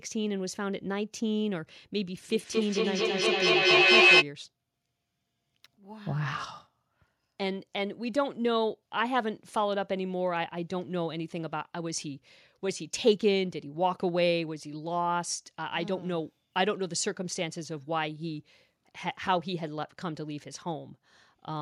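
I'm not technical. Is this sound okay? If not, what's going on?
No. From 2.29 to 4.28 s there's feedback echo between two devices: two devices on the same call in one room pick up each other's playback, so the speech loops back about every fifth of a second and piles up louder than the talking itself.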